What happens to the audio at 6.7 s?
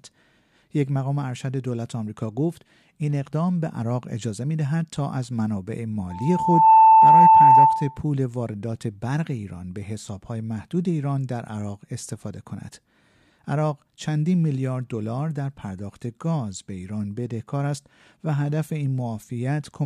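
A loudspeaker feedback squeal is under way, running from 6.10 s to 8.00 s. A microphone is picking up the loudspeaker it drives, and around 886 Hz the round-trip gain exceeds unity, so that frequency reinforces itself on every pass. It swells from nothing over roughly three-quarters of a second into a steady, piercing tone that stands some 15 dB above the speech until it ends.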